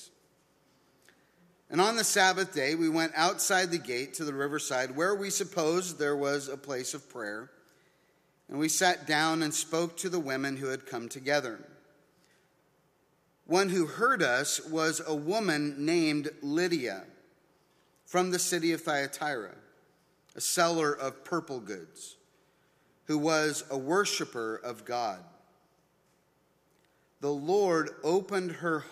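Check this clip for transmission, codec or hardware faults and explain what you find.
Nothing in the clip points to a transmission, codec or hardware fault. The sound holds together throughout, with no break or disturbance that would mark one.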